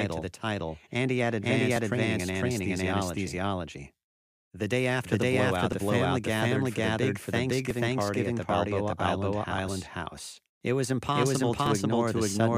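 From the first moment to the end, the speech carries a doubled audio track. A second, full-band copy trails the original by about half a second at roughly the same level, so every syllable is answered by a dry, uncoloured repeat with no room decay, most likely from the signal being captured twice through a slower second path. On a spectrogram the whole pattern of harmonics and consonant bursts appears twice, shifted right by about 0.5 s. The waveform shows each burst of energy echoed by a same-height twin.

Layered on top, audio goes missing between chunks at 1.76 s (between "title and he had" and "training in anesthesiology"), 3.74 s, 5.72 s (between "day after the blowout" and "the family gathered for"), 7.70 s (between "gathered for the big" and "party at the"), and 11.66 s. At each point about 20 ms vanishes and the two sides butt together with no gap, heard as a small hiccup or skip. 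The spacing of roughly 2 s points to a recorder likely dropping samples as it closes one 2-second chunk and opens the next. A spectrogram shows a thin vertical seam where harmonics jump discontinuously, and the waveform shows a step where the cycles fail to line up.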